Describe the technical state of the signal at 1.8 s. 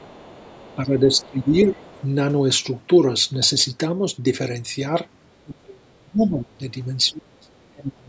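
At 1.8 s the echo canceller is likely struggling with double talk. With both ends talking at once, it could not tell the local voice apart from loudspeaker echo and turned everything down. This speech suppressed in double talk runs from 0.75 s to 1.8 s, so the moment falls at its very end. Across roughly 0.7 s in all, the voice dips by up to around 10 dB, sounding ducked and partly cut away.

In the same moment, the other side's voice is leaking through, from 1.22 s to 2.06 s. The other party's audio, played from the local loudspeaker, was likely not fully removed from the microphone pickup. It sits faintly underneath, around 30 dB below the main speech, as a second voice bleeding into the signal.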